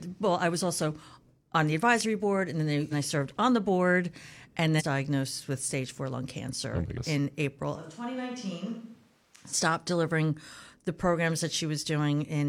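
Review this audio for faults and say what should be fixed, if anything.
Compressed frames are skipped at 2.88 s, 4.76 s and 6.93 s. The speech jumps forward by roughly 150 ms, 700 ms and 150 ms, which fits whole frames of about 42.7 ms being lost. Checksum-verified transfers and decoders that conceal damaged frames would prevent it.

From 7.76 s to 9.53 s the speech turns roomy and hollow, with thinner bass. It becomes about 10 dB quieter and room noise rises to about 30 dB below the speech. The change in and out is abrupt, not a gradual drift. That points to a likely switch to a distant microphone. Recording the close microphone on a redundant backup track would prevent it.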